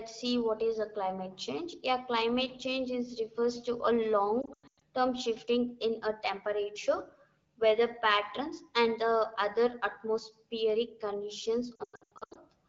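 Lost AMR speech frames hit this speech at 4.42 to 4.83 s and again at 11.75 to 12.38 s. Radio errors corrupted frames, so the wideband decoder stretched the last good pitch and vocal tract settings with falling gain. Losses are scattered across each span, the longest run about 100 ms, giving repeated dips and warbles and brief smeared, fading stretches. The voice returns thin or rough after each gap.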